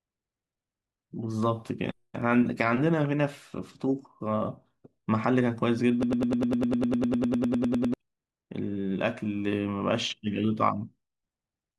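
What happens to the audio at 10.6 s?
Nothing goes wrong at 10.6 s: the speech carries on intact through that moment, with no break, dropout, click or distortion.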